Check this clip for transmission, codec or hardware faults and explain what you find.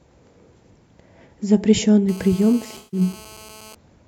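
Two faults overlap in the second half of this speech clip, one picked up by the hardware and one from the codec.

From 2.09 s to 3.75 s there is GSM phone buzz. A nearby 2G handset on a call transmits in bursts at 216.7 Hz, and the audio circuitry rectifies those radio pulses into a hard, raspy buzz at about -25 dB relative to the speech. Because the phone is holding a call, the buzz is nearly steady. It is unrelated to the speech. Mains hum sits at 50 or 60 Hz and sounds smooth. This buzz is higher, gritty and rich in harmonics.

From 2.77 s to 3.00 s, inside the buzz, there is AAC frame loss with concealment. About 150 ms of coded audio went missing, which fits a run of several consecutive frames. The decoder filled the gap by reusing the last good spectrum with altered phase and energy, so the speech turns into a smeared, noisy, phasey patch rather than going silent. A plain packet dropout would leave a hard gap or clicks. 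Here the sound continues, but it comes out blurred.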